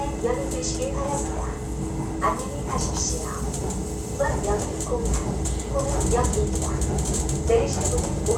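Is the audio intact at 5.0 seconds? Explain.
Yes, at 5.0 seconds the audio plays through cleanly, with no dropout, click or distortion interrupting the sound.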